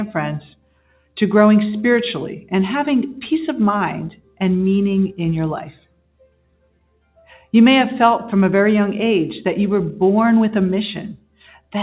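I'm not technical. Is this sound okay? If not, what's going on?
No. A noise suppressor applied to music or sounds, a filter built to clean up speech, stayed switched on during the call. It mistakes steady tones and lingering echoes for background noise and keeps pulling them down, so the level pumps and thins throughout.

In places, the sound was cut by the noise suppressor harder than elsewhere: at 0.55 to 1.17 s, 4.15 to 4.41 s, 5.69 to 7.53 s and 11.14 to 11.74 s. Held and fading parts sink sharply there, while sudden hits still come through.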